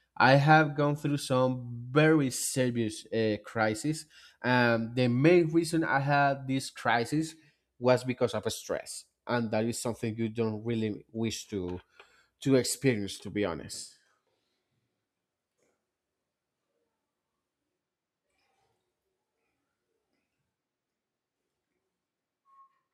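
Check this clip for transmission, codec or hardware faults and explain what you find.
One fault is present. From 13.76 s, right after "to experience to be", the speech turns suddenly roomy and hollow and thins in the bass until the end. This points to a switch to a distant microphone, likely because the close microphone's feed dropped. Level barely changes, and room noise sits roughly 35 dB below the speech.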